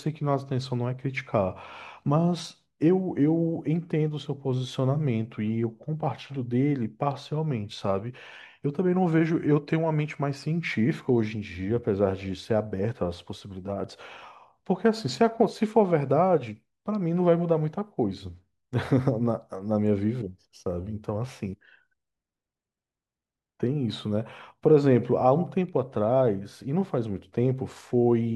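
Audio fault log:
No fault is heard in this speech clip.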